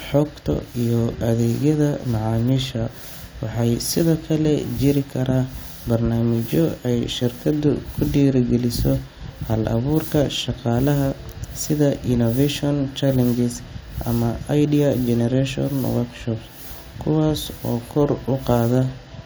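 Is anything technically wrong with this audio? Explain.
No, the speech recording shows no technical faults anywhere in the signal.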